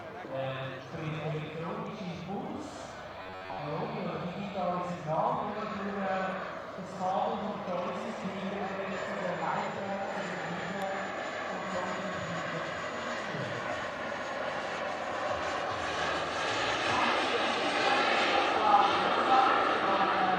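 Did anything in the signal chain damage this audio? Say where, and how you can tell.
Yes. From 3.22 to 3.59 s the sound collapses into a rigid, metallic buzz at 93.8 Hz, with most of that stretch repeated. That's robotic sound from repeated short buffers, likely a driver or buffer underrun looping roughly 10.7 ms chunks while real audio gets skipped.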